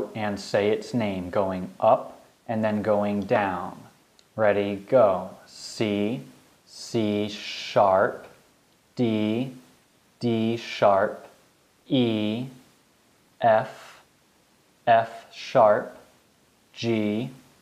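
No technical faults are audible.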